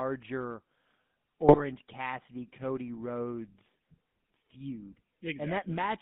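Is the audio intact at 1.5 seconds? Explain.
No. GSM bit errors hit from 1.48 to 1.61 s, a burst of about 0.13 s, which fits roughly six consecutive 20 ms decoder frames. Corrupted bits in the received stream scramble the filter coefficients, pitch lag and gain values the decoder relies on, so each hit frame is rebuilt with a warped spectrum or a jump in level. The audio breaks into squawks, pops and gargling before it settles again.

The GSM full-rate codec colours this moment too, as it does the whole clip. The decoder rebuilds the sound from a vocal-tract filter driven by a sparse, regularly spaced pulse excitation, which fits a 13 kbps full-rate stream. The band runs only from about 150 Hz to 3.6 kHz, so there are no highs, and the sound has a clearly audible buzzy, gravelly roughness.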